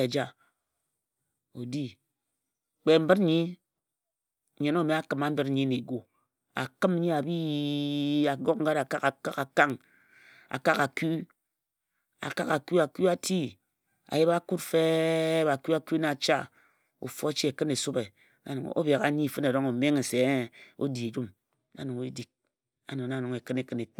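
From 5.16 to 6.40 s, a block size mismatch (truncated) chops each 1024-sample block's tail, causing a 43.1 Hz buzz. Unlike a sample-rate error, pitch and pace stay normal.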